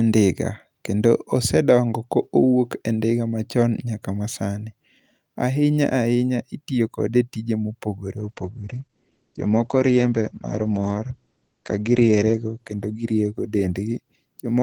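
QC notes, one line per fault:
8.19–14.63 s, call bitrate drop: after "kode e tije mopogore" the audio turns coarse and muffled, with highs cut off at 8 kHz. That fits the encoder being squeezed from about 48 to 11 kbps.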